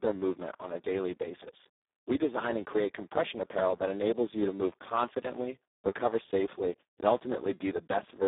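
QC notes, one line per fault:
Throughout, Speex codec: the speech sounds hoarse, buzzy and close to robotic, which points to a very low setting around 4 kbps. Too few bits reach the excitation signal. The band sits at about 300 Hz to 3.7 kHz, with nothing above 3.8 kHz.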